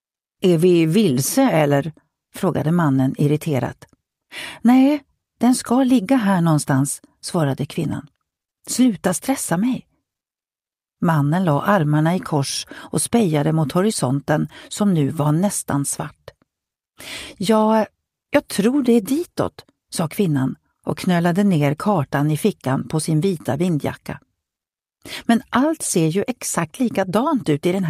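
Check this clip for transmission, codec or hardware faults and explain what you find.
No faults detected here.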